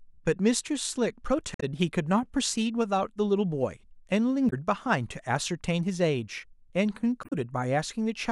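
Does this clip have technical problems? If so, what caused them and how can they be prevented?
Yes. Damaged data in a compressed stream causes brief glitches at 1.53–1.63 s, 4.46–4.53 s and 7.21–7.33 s. Corrupted bytes made the decoder misread frames and lose sync. Checksummed, error-protected storage and transfer would prevent this.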